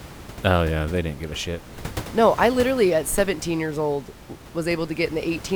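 No technical faults can be heard in this speech recording. A steady room noise sits underneath, about 16 dB below the speech, and it belongs to the room where the microphone was rather than to the system.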